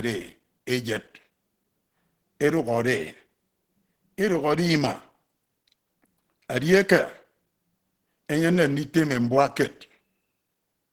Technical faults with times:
0.00-10.92 Opus compression

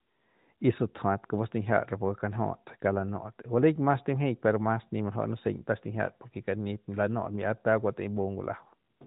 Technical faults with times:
none

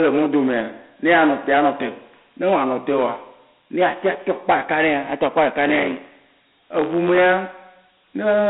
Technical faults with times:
0.00-8.49 hard clipping
0.00-8.49 Dialogic VOX ADPCM
5.68-7.22 buffer tearing

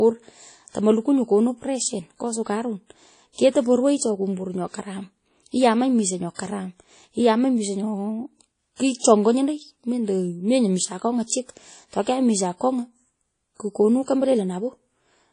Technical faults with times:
0.00-15.32 WMA compression

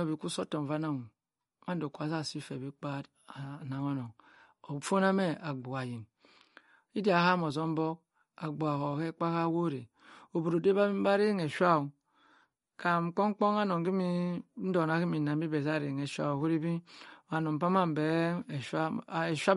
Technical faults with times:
0.00-19.56 MP3 compression

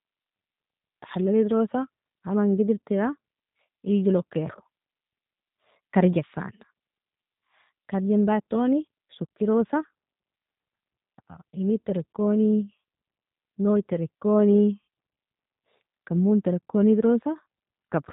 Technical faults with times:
0.00-18.13 G.729 codec

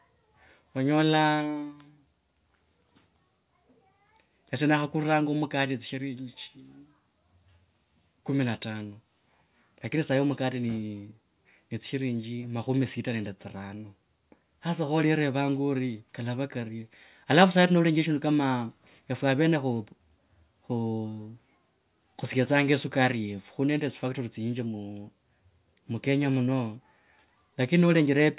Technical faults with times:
none

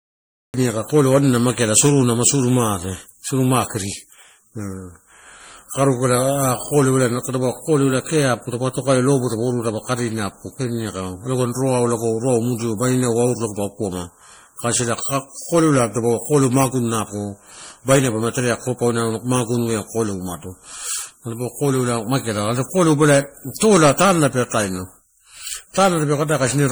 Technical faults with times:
0.00-26.71 generation loss
0.00-0.54 cut-off start

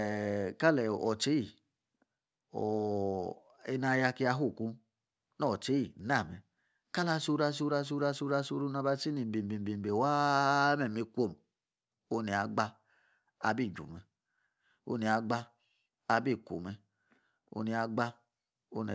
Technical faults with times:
0.00-18.94 aliasing

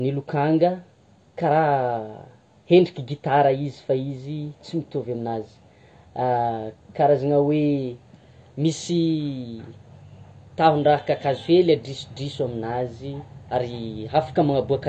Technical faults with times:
0.00-14.88 AAC compression

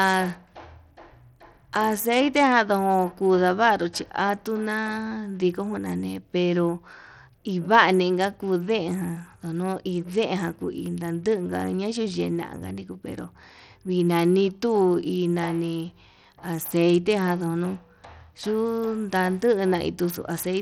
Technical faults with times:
0.00-20.61 Bluetooth SBC compression

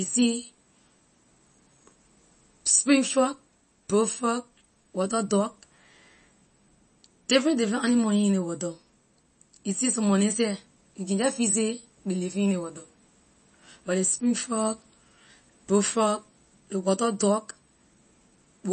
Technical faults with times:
0.00-18.73 MP3 compression

